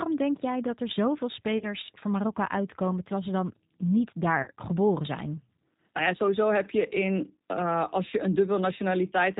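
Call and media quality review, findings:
Rough, slightly synthetic speech with nothing above 4 kHz, throughout. G.729 codec, consistent with 8 kbit/s G.729A: the sound is rebuilt from a vocal tract filter, a pitch predictor and sparse pulses, so the damage is plainly audible.

Brief smear fading out at 1.58–1.65 s and 4.43–4.48 s. VoIP packet loss concealed by the speech codec. Each gap fits a single lost 30 ms packet: the decoder extrapolates from its last pitch and filter while the gain drops.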